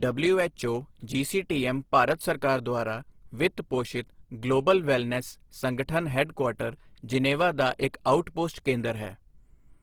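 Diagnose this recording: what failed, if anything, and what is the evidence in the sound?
The failure sits at the codec stage, most likely Opus compression in its CELT music mode, running through the whole speech clip. The damage is plainly audible: the sound is grainy and rough rather than swirly, because the encoder preserves each band's energy but fills starved bands with folded or noise-like content. The bandwidth stays wide, reaching about 20.2 kHz, yet the texture fits a low bitrate of around 16 kbps.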